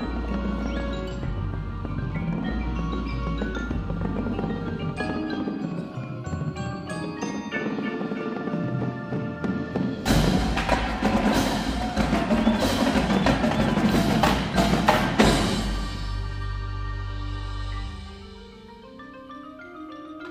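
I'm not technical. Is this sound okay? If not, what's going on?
Yes, nothing here points to a technical fault in the recording or its playback.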